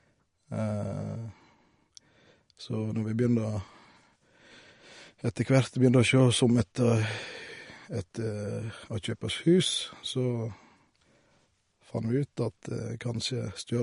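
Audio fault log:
Throughout: MP3 compression, plainly audible across the speech. Nothing survives above about 10.6 kHz, a hard treble ceiling that fits a low bitrate around 40 kbps. Short of bits, the encoder likely dropped quiet spectral lines, which flicker in and out frame to frame, giving a watery, swirling texture and metallic chirps on s sounds. On a spectrogram this shows as a flat shelf cut at 10.6 kHz with speckled, patchy holes below it.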